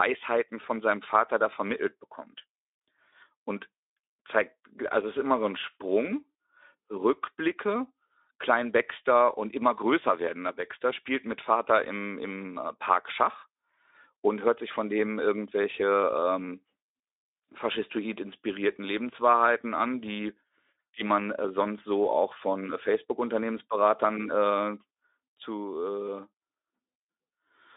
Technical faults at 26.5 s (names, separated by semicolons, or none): none